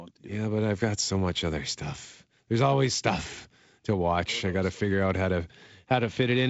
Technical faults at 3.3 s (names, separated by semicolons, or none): none